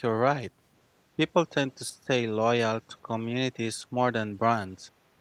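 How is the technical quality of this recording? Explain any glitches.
The speech dips in three short places, at 1.17 to 1.24 s, 1.9 to 2.11 s and 2.88 to 2.95 s. The second dip is deep, roughly 25 dB for about a fifth of a second. The first is moderate, around 10 dB, and the third is slight. The pattern points to speech suppressed in double talk, likely caused by an echo canceller that could not tell this talker from the far side's returning echo while both spoke at once, so it turned everything down.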